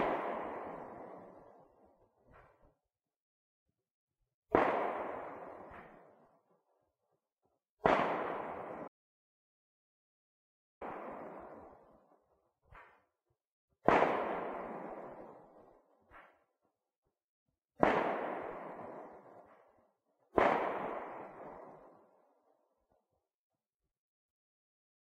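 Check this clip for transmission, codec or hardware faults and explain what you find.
One fault stands out. From 8.88 to 10.81 s the sound cuts to silence for about 1.9 s, with no room tone: an audio dropout to silence, likely from a lost input while recording continued writing silence.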